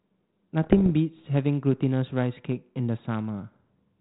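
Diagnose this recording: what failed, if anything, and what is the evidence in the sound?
The fault lies in the transmission stage: bit errors on an ADPCM link, heard as pops and rough bursts with brief level jumps from 0.63 to 0.91 s, on a light 32 kbit/s G.726 carrier. Each flipped bit corrupts the decoder's adaptive step size and predictor, so the disturbance rings on for milliseconds, unlike packet loss, which leaves gaps or smoothed-over concealment.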